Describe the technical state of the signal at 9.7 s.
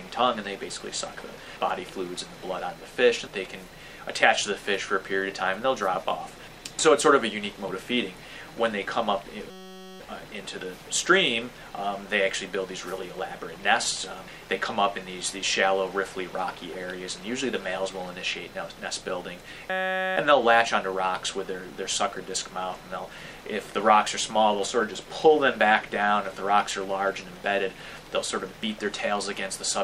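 At 9.7 s the signal is caught in a system hang loop, lasting from 9.50 to 10.0 s. The system froze while the sound hardware kept replaying the same stretch of its ring buffer. That stretch is 5.33 ms long, which fits a 256-sample buffer. It repeats about ninety times in a row. Because the loop is so short, it sounds like a steady buzz at 188 Hz rather than a stutter.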